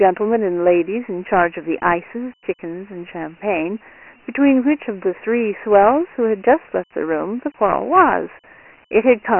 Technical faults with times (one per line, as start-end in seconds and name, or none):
0.00-9.40 Dialogic VOX ADPCM